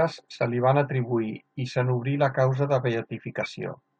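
At 3.43 to 3.46 s a corrupt frame was decoded: a single damaged frame played with misread codes, giving a brief chirp or blip peaking around -20 dBFS, seen as an isolated misplaced energy smear.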